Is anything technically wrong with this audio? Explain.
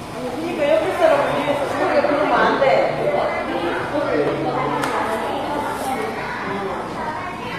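Yes. Throughout the clip the treble is clearly damaged in a way that points to HE-AAC compression, likely at a low rate around 24 kbps. The core codec carries only the lower spectrum, and the upper bands are synthesised by copying lower content upward and shaping it with a coarse envelope. The top end stays bright, but its harmonics don't line up with what lies below, so high-frequency detail sounds gritty and metallic. Nothing is present above 14.9 kHz.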